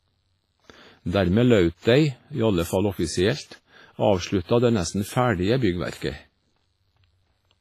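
WMA compression runs throughout the speech: a ringing, washy texture with hiss that swells and fades with the signal, and nothing above 15.4 kHz. It likely comes from a transform codec at a low bitrate, around 24 kbps, with heavy damage, spreading quantisation noise over long blocks and zeroing weak components.

Pre-echo appears from 5.98 to 6.01 s, a hiss about 36 ms long just ahead of a sharp attack. The encoder sized its noise for the loud onset, then spread it across the whole block, so it leaks into the quiet moment before and softens the attack.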